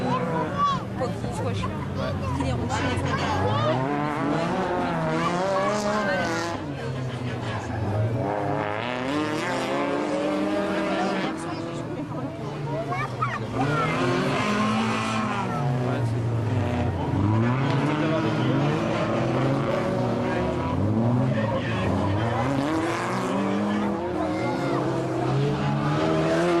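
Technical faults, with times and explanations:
11.23 to 11.25 s, skip ahead: About 0.7 s of audio is simply missing. Playback jumps forward with no gap filled in. The sound before and after the jump is joined almost directly. Later audio was already waiting, so the dropped stretch was passed over.
15.72 to 18.16 s, jitter buffer speed-up: The audio runs at about 106% speed while the pitch stays the same, so it sounds hurried. The buffer held more audio than it aims for. The receiver cut many short pieces, about 150 ms in total, to reduce the delay.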